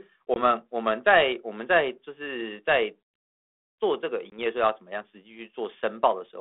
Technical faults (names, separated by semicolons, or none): packet loss on an ADPCM call